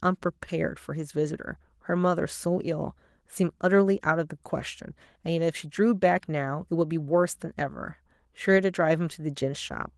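No technical faults occur anywhere in this speech recording.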